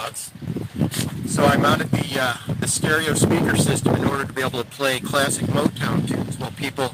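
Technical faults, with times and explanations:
Nothing in this one jumps out as a technical problem, and the audio just rolls along without anything catching the ear.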